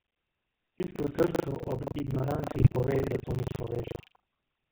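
From the first moment to the end, the speech carries the gravelly, buzzy edge of the GSM full-rate codec, and it's plainly audible. The codec models the voice as a vocal-tract filter fed by a thinned-out pulse excitation, so there's a coarse graininess sitting on every syllable. Nothing makes it above 4 kHz, which gives the dull, boxed-in phone sound. The overall thinness fits the 13 kbps full-rate coding.

Also running the whole way through is buffer tearing, heard as a steady robotic rattle at 25 Hz that's only there while there's sound, not in the gaps. The writer and reader of the playback ring buffer have drifted so they cross inside each 40 ms period. Something like a third of each period is stale audio from roughly 150 ms earlier, spliced in with hard edges on both sides. That once-per-period jump is what you hear as the buzz.

Then from 2.52 to 2.73 s, just before "pove da to ni", there's a short burst of GSM bit errors. 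Corrupted bits reached the decoder on what sounds like a weak link, mangling the filter, pitch and gain parameters frame by frame, at an error rate of about 2%. For that fifth of a second the speech breaks up into squawky, gargling pops with lurching level and twisted tone before it settles again.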